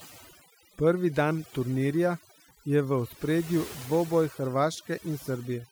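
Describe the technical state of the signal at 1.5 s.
At 1.5 s the speech is under overdone noise removal, a fault that runs through the whole clip rather than starting or stopping there. A noise reduction stage set far too aggressively is pulling individual frequency bands down or shutting them off whenever they sit close to its noise estimate, and the softer parts of the voice get cut along with the noise. The result at this point is a background that drops and breaks up into twinkling, warbling specks.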